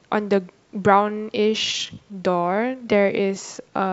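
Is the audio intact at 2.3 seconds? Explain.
No. A time-stretched section spans 1.0 to 3.93 s. Software likely slowed it to 0.74 times speed and repeated short pieces to hold pitch, so the speech drags.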